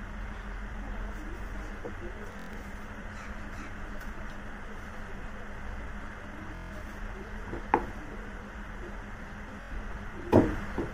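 Bluetooth stutter at 2.32–2.57 s, 6.55–6.73 s and 9.62–9.73 s. Late packets are replaced by the last buffer replayed, causing a machine-gun buzz. The spectrogram shows identical repeating slices, and the waveform shows copied blocks before the sound jumps ahead.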